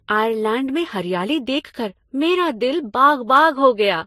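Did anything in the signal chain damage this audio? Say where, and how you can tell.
Yes. Across the whole speech clip, two different flavours of coding grit sit on top of each other, and nothing reaches above 16.3 kHz. That points to the codec stage, likely transcoding between lossy codecs, which fits Vorbis to MP3 and back to Vorbis at low bitrates, each pass re-encoding the last one's artefacts.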